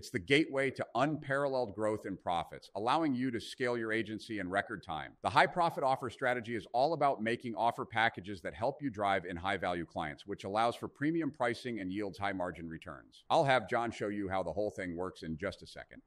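From 5.25 to 6.77 s a faint hiss and roughness rides on the sound, from sample clock jitter: timing wobble of around 2 microseconds leaves error about 40 dB below the signal.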